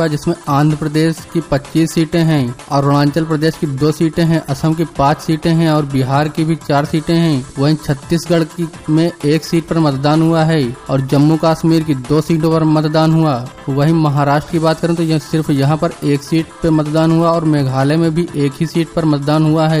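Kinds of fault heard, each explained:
No technical faults can be heard anywhere in the clip. Nothing in the audio calls for a named fault or an explanation.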